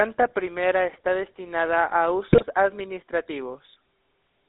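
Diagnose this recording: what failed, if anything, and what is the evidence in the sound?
Codec stage. The GSM full-rate codec colours the whole clip. Speech sits in a band of about 300 Hz to 3.7 kHz. It sounds plainly buzzy and gravelly. The decoder rebuilds speech from a vocal-tract filter driven by sparse, regular pulses, consistent with 13 kbps full rate.

Network stage, on the radio link. GSM bit errors break in from 2.28 to 2.44 s, just after "primera está destinada a". The speech squawks and gargles there. Flipped bits reached the decoder. Corrupted filter, pitch and gain values bent the spectrum and level for several frames.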